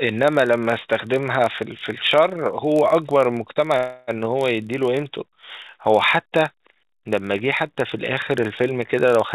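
A stage in the chain wrote blocks slightly shorter than the next stage read and padded the remainder with zeros, a block size mismatch (padded) that affects this speech recording throughout. The short gaps recur at 43.1 Hz, which fits 1024-sample read blocks, and are heard as a steady low buzz under the speech, which runs about 0.1% slow at normal pitch. From 3.77 to 4.10 s a call audio freeze occurs, likely because delayed packets let the jitter buffer run dry. The receiver stretched the last sound into a fading buzz or hiss for about 300 ms, then resumed where it stopped, so nothing is lost but the speech arrives 300 ms later from there on. The call path's G.711 A-law coding leaves nothing above 4 kHz.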